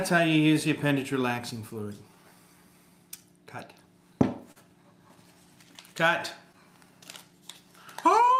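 Clock drift between sender and receiver runs through the whole clip: the sender's clock is roughly 3% slow, so the receiver's buffer keeps running short rather than overflowing. From 0.12 s to 8.29 s, repeated timing corrections stretch the audio to 97% speed, adding about a fifth of a second in small, unevenly spaced repeats. This sounds like a faintly dragging, unsteady tempo, not discrete dropouts. At 4.52 to 4.58 s, a short stall from a late packet holds the sound for 41 ms with a slight buzz or dip. Unlike a packet loss, nothing is skipped, and the audio resumes exactly where it paused.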